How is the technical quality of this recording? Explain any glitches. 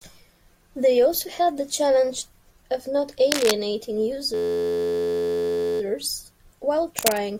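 The recording has two kinds of glitch: brief scratching bursts at two points and a sustained buzz where the audio freezes.

Cable scratch noise occurs at 3.32–3.52 s, just after "the challenge of not", and again at 6.99–7.18 s, just before "to make". Dense, uneven crackle rises to about the level of the speech. The likely cause is a worn connector or cable shifting, which makes its contact resistance jump erratically. The bursts are irregular, with no repeating pitch.

A system hang loop runs from 4.34 to 5.81 s. Playback stalls, and one 11.61 ms slice of audio repeats over a hundred times, which fits a 512-sample buffer cycling while the driver is frozen. The result is a steady, evenly pitched buzz at 86.1 Hz. That strict periodicity sets it apart from the ragged scratching.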